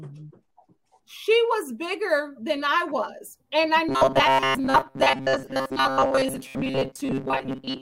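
From 3.89 s to the end at 7.82 s, the sound collapses into robotic sound from repeated short buffers: a rigid, metallic buzz pitched at 133 Hz that still loosely tracks the underlying contour. The likely cause is audio arriving too slowly, so playback keeps looping a fragment of about 7.5 ms, one period of that buzz, to cover the gaps. Most of this stretch, around 70 percent, is repeated material, and the skipped audio is lost.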